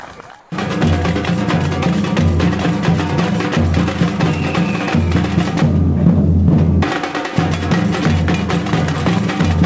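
From 0.40 to 0.52 s, a 120 ms gap is filled with comfort noise in place of the background, likely from discontinuous transmission. The receiver substitutes steady synthetic hiss at the same level, about 36 dB below the loud parts. On a spectrogram the background's fine texture becomes a smooth, uniform band, and the waveform shows a flat, even noise floor. Like the rest of the clip, the patch has nothing above 8 kHz, which fits a wideband call codec.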